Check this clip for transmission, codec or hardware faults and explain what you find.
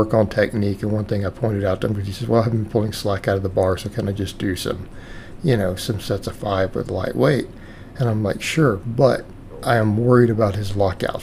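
Nothing here points to a transmission, codec or hardware problem; it all sounds fine.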